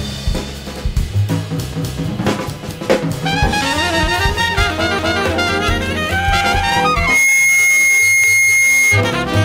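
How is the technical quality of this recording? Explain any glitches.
Two clear problems show up in the last few seconds, both in the back end of the clip.

From 6.93 to 9.12 s there's loudspeaker feedback squeal at 2.2 kHz. The mic is hearing its own speaker, and at that frequency the loop gain tops one, so the tone feeds itself. It swells up within roughly a third of a second and sits about 5 dB above the program sound.

Inside that squeal, from 8.24 to 8.49 s, you get overlapping chunks. The audio was handled in blocks that start before the previous one finished, so a 250 ms slice plays twice at the join. It comes across as a stutter, which fits 3-second chunks.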